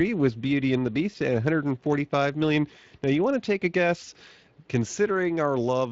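Speex codec damage runs throughout: CELP coding leaves the speech plainly hoarse and noisy, with a coarseness that fits a bitrate around 20 kbps.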